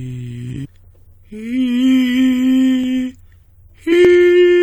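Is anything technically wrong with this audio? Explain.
Yes. The music has two kinds of technical fault.

Damaged data in a compressed stream, at 0.64–0.66 s and again at 3.91 s: corrupted frames throw the decoder out of sync, giving brief chirps, squawks, clicks or holes that show as broadband vertical smears or waveform discontinuities.

Sample clock jitter, from 1.38 to 3.43 s: timing wobble of roughly a microsecond or two adds rough hiss, around 50 dB below the music, that thickens the spectrogram's high-frequency floor during loud passages.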